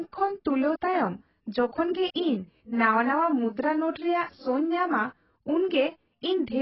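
Heavy AAC compression, likely an AAC-LC encode at a very low bitrate, affects this speech recording for its whole length. The sound fits a budget of around 13 kbps. With so few bits, the encoder discards everything above about 5.6 kHz and coarsely quantises what remains. As a result, the speech sounds dull and muffled, sibilants turn smeared and fizzy, and sustained sounds carry a warbling, watery texture from gaps in the spectrum.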